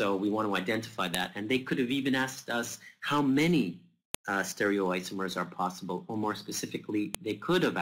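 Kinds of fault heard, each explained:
File header played as audio: separately saved WAV pieces were joined or streamed without their header bytes being removed, so each header of a few dozen bytes was treated as sample data and played. In this clip that gives a sharp, loud click at 1.15 s, 4.15 s and 7.15 s, exactly 3.0 s apart, one at the start of each piece, landing regardless of what the surrounding sound is doing at those moments.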